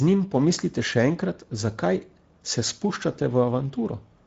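Throughout the clip, the speech has passed through the Speex codec at what sounds like a middle setting, consistent with roughly 17 kbps, so the excitation is coarsely coded. The damage is plainly audible: a noisy, hoarse texture, a synthetic fill in the upper band, and nothing above 7.7 kHz.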